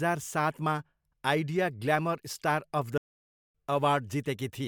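At 2.98 s the player likely ran short of incoming data, or its output thread was held up, and with nothing to send to the output it fell silent. This playback stall lasts about 0.57 s, until 3.55 s. The speech cuts off in mid-flow into a dead gap rather than a natural pause, and then carries on once the player has recovered, with the break clearly audible as an interruption.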